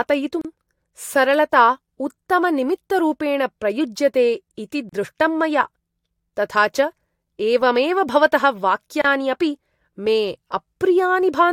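Brief holes open in the speech at 0.41 s, 4.89 s and 9.02 s, each a sudden drop to silence of about 29 to 34 ms with softened edges, after which the sound picks up exactly where it left off. These are gaps at a join of encoded pieces: the recording was encoded in separate sections and spliced without trimming, so each section's encoder start-up delay and final-frame padding survive as silence at every seam.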